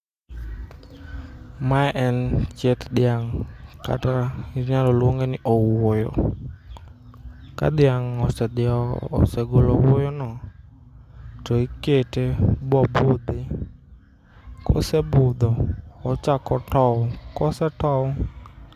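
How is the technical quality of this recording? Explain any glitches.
The technical quality of the recording is sound, with no glitches to explain.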